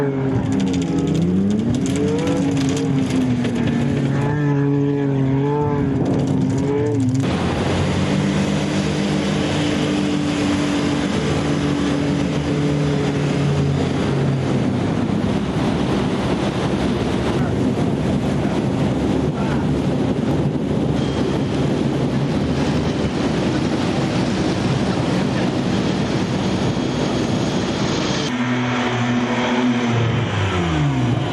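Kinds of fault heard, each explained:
Gain pumping: throughout, the gain is pulled down on loud sounds, swinging by about 15 dB, likely from gain set far too high with a fast limiter catching each peak.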